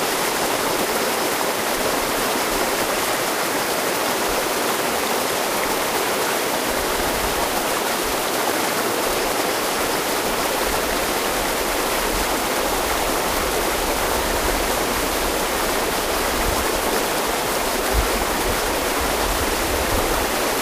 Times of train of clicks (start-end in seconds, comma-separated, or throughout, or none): 9.34-20.54